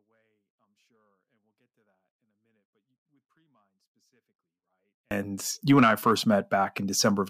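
From the start until 5.11 s, the speech sits almost at the threshold of hearing, dropping by about 48 dB the moment it begins, with full level returning just before "you and I first". This is a 24-bit alignment error (too quiet): 24-bit samples held in the low bytes of a 32-bit word were read as full 32-bit integers, shifting everything down by eight bits. Unlike a fade or ordinary gain mistake, the drop is abrupt and exact. Unlike bit-depth truncation, the faint sound stays clean, with no grain or hiss added.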